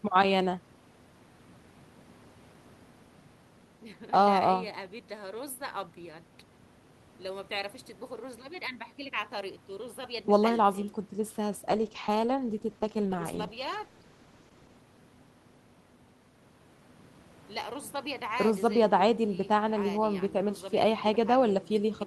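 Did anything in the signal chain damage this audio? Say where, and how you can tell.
Yes, there's a call bitrate drop between 11.73 and 14.85 s. The speech suddenly goes rough and a bit watery, loses its top end, and sits there for about 3 s before snapping back. That points to the network side of the call: the bandwidth estimate dipped, so the encoder was told to spend far fewer bits, from something like 32 kbps down to 13 kbps. It then quantised coarsely and dropped the high band until the rate came back up.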